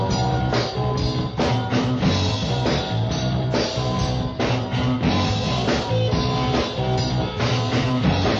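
Nothing technically wrong turns up here; the audio runs along without any fault to point at.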